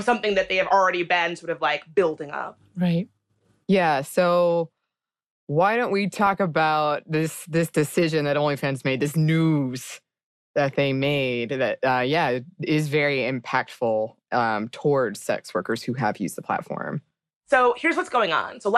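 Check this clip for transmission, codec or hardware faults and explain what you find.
Two faults are present: a compression sound running through the whole speech clip, and two short bursts of DAB burbling.

Throughout, the speech sounds dull and granular, with a gurgling quality. This is MP2 compression, likely from a low bitrate, around 80 kbps, where upper sub-bands get switched off and the remaining bands are coarsely quantised.

From 6.27 to 6.34 s and again from 18.44 to 18.47 s, brief bursts of burbling sit over the speech. This is DAB burbling: a small fraction of bit errors slipped past error correction, so wrong samples put short blips of noise in single sub-bands.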